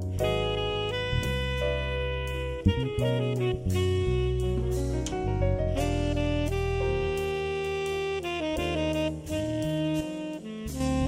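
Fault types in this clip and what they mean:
One channel drops out: from 10.01 to 10.80 s the sound abruptly falls about 6 dB, likely because one stereo side vanished before the mono sum.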